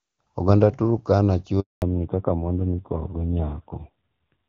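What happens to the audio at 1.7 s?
At 1.7 s the speech sits inside a handover gap, from 1.60 to 1.82 s. The call is switching networks, and no speech frames arrive for about 220 ms. The voice fades out quickly, then there is dead silence until the new link resumes.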